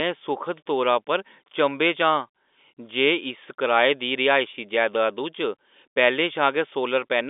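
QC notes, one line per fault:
Nothing to flag here; it's ordinary G.711 telephone speech, with the line band running from about 250 Hz to 3.6 kHz and nothing above 3.8 kHz, just as a phone line should sound.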